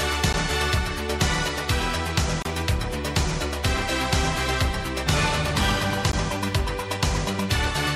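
Gaps at joins of encoded pieces appear at 0.33 s (about 13 ms), 2.42 to 2.45 s (about 29 ms) and 6.12 s (about 17 ms). Each is a short gap where separately encoded sections were joined with their start delay and end padding left in, so the audio resumes exactly where it stopped.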